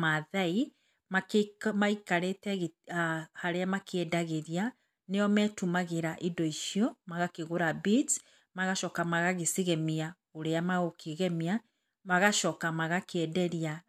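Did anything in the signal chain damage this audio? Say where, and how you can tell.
No, nothing in the signal chain damaged this audio that can be heard in the recording.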